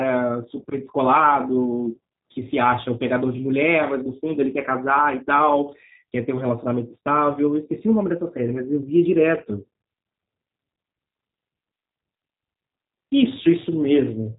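From start to finish the speech carries G.729 codec damage: nothing above 3.8 kHz, and a rough, synthetic quality from low-rate model-based rebuilding, which fits 8 kbit/s.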